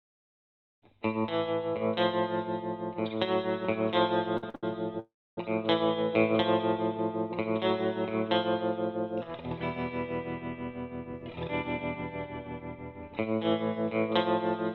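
At 4.37 s, 4.50 s and 4.55 s come three short stalls from a late packet. Each time a packet was due but missing, and the buffer ran dry. The last sound is held for 52, 45 and then 75 ms. Then the audio resumes where it stopped.

From 4.99 to 5.38 s there is a call audio freeze. The last sound is carried on for 376 ms, including 280 ms of silence. The likely cause is packets delayed in transit. The audio then continues from the same point, with a gap inserted.

From 11.04 to 12.02 s a jitter buffer speed-up follows. Too much audio had built up. Short pitch-length pieces were cut out repeatedly, about a tenth of a second in all. The sound runs at 109% speed with unchanged pitch and feels hurried.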